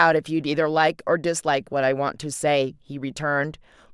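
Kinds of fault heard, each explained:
No technical fault can be heard in this speech recording. There is nothing to explain here.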